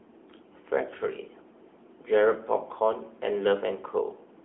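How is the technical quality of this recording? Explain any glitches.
Technical quality is limited by a single fault that runs through the whole clip.

AMR narrowband mobile codec, throughout: the speech has been squeezed into a mobile narrowband channel, which models the vocal tract and drives it with a few coded pulses per short frame. The line passes roughly 250 Hz to 3.4 kHz, with nothing above 3.7 kHz, so the voice sounds thin and boxy. The coding damage is plainly audible as a buzzy, synthetic edge, which fits a 10.2 kbps mode.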